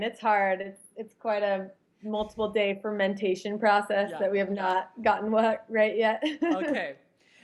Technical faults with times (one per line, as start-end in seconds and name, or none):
0.61-0.66 short stall from a late packet